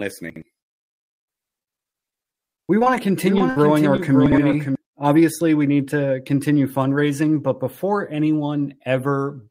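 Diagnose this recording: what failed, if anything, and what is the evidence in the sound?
Chunks out of order, at the buffer or network reordering stage. At 0.30–0.42 s and again at 4.26–4.38 s, a 60 ms piece of speech plays one chunk late, after the piece that should follow it. The speech sounds briefly jumbled.

Repeated packet loss (robotic sound) on the network path, from 1.59 to 2.88 s. Holes of up to 39 ms recur throughout the stretch, and concealment fills about 23% of it. Each fill extends the previous sound, so the speech turns choppy, with fragments missing.

Doubled audio track from 3.24 to 4.75 s. A second copy of the speech, full-band and a few dB quieter, runs about half a second behind the original, with no room colour. It starts and stops abruptly. This is likely a second capture path or an edit that left two offset copies.

Short concealed packet loss on the network path, at 3.38–3.42 s and 3.96–4.00 s. 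About 20 ms of audio failed to reach the decoder each time. The receiver extrapolated across each hole and blended back in, leaving a brief smear or wobble.

Burst of packet loss on the network path, at 3.50–3.58 s. About 60 ms of consecutive audio went missing. Concealment extended the last sound and faded it out, so a short held buzz or hiss replaces the speech before playback resumes further on.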